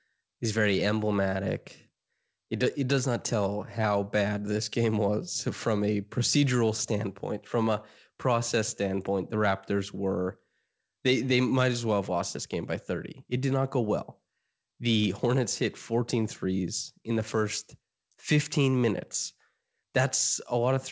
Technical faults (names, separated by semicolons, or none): none